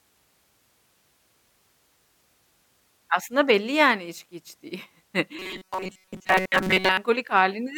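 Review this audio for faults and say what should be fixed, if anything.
From 5.39 to 6.98 s, robotic sound likely from repeated short buffers: a rigid 188 Hz buzz, visible as flat harmonic stripes and roughly repeating waveform cycles. Deliver audio on time, or enlarge the playback buffer, so the player never has to repeat old samples.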